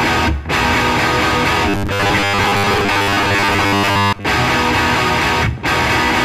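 Robotic sound from repeated short buffers runs from 1.69 to 4.25 s. The music takes on a rigid, metallic 100 Hz buzz, likely because new audio arrived too seldom and a 10 ms chunk was replayed in place of most of the real signal.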